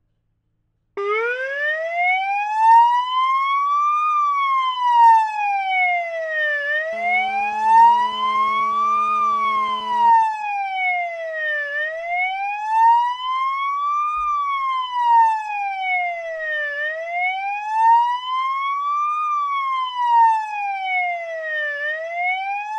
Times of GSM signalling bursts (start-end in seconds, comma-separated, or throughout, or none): 10.22-11.18